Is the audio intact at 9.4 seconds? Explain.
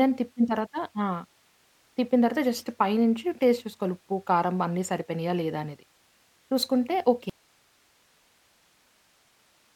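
No. At 9.4 seconds the speech is gone: an audio dropout to a faint residue begins abruptly at 7.30 s and lasts to the end of the clip. The speech cuts off mid-flow rather than pausing or fading, and the gap holds only a low hiss roughly 40 dB below the speech level. The likely cause is a loss of the wanted signal upstream while the path after the break stayed live and kept passing its own noise.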